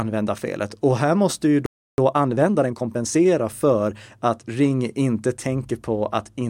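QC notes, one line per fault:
1.66–1.98 s playback stall: the player likely ran out of buffered data or was blocked, so the speech cuts to silence for 0.32 s right after "och här måste ju".
1.98–3.26 s time-compressed catch-up: the player trims its backlog by cutting and cross-fading short slices, so speech runs 1.25 times fast at unchanged pitch before "för att".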